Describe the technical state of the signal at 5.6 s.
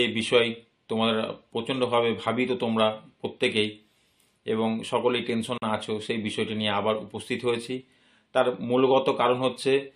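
The signal breaks at a gap at a join of encoded pieces, between 5.58 s and 5.62 s. Two separately encoded segments were spliced without trimming. The encoder's start-up delay on one side and the padding of the final frame on the other were both left in. The result is a gap of about 43 ms cut into continuous sound, its silent part somewhat shorter. Its edges are smeared by the codec, and the sound then resumes exactly where it left off.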